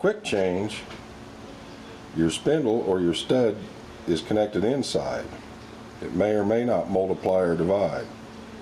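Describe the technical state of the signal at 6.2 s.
At 6.2 s the signal shows gain pumping, as it does through the whole clip. The gain swings by roughly 10 dB, leaving loud and soft parts closer in level and the sound squashed. The likely cause is input gain set far too high, with a fast limiter clamping each peak.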